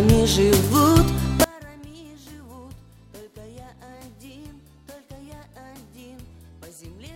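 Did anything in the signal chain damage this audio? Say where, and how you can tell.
Yes. From 1.44 s to the end, the level drops by about 27 dB and only a faint residue remains, which points to one channel inverted, likely from a polarity-swapped lead in the analogue wiring. When summed to mono, the shared centre content cancels and only the inter-channel difference survives.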